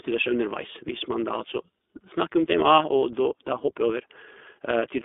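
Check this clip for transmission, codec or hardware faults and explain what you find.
The speech has passed through the iLBC codec throughout. Each 20 ms frame is coded independently within a 250 Hz to 3.5 kHz band, consistent with its 15.2 kbps mode, leaving plainly audible roughness, a synthetic edge and narrowband dullness.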